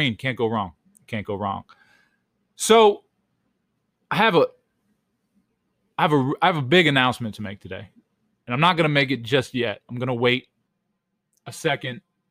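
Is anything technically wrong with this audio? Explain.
Yes. From 10.68 s to the end at 12.31 s, the speech turns hollow and phasey, with a thin, tubular colouring that stays fixed. This is channel delay (comb filtering). One channel arrives about 5 ms late, and when the two are summed to mono, shared content cancels at evenly spaced frequencies. The first notch sits around 100 Hz, with further notches repeating up the spectrum, which carves the voice into that hollow tone.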